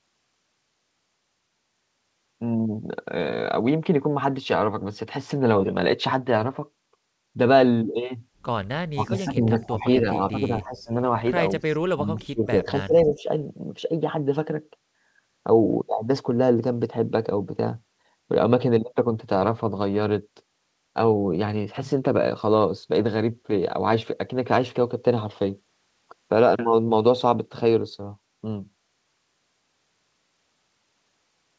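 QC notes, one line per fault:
8.93 to 10.91 s and 11.93 to 13.28 s: speech suppressed in double talk. The voice dips by up to about 20 dB, for roughly 1.5 s and then 1 s. This is likely an echo canceller turning down this side's voice along with the loudspeaker echo. The band stops near 8 kHz, consistent with G.722.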